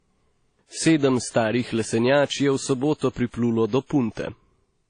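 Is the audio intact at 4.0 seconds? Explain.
No. At 4.0 seconds the speech carries transcoding between lossy codecs, present throughout. It likely passed through one lossy codec and then a second. The artefacts of both sit together, and nothing is heard above 9.8 kHz. The sound points to WMA then AAC-LC, both around 32 kbit/s.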